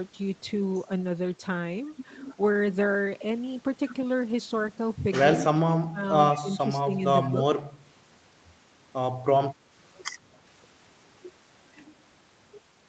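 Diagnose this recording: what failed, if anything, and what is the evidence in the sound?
Call processing: speech suppressed in double talk at 5.37–6.02, 6.40–6.60, 6.84–7.04, 7.30–7.42 and 7.60–7.64 s. The level dips by up to about 25 dB, likely from the echo canceller ducking during simultaneous talk.

Call processing: a brief echo leak at 7.22–7.27 s. A faint copy about 30 dB down arrives 129 ms late, likely residual loudspeaker echo the canceller missed.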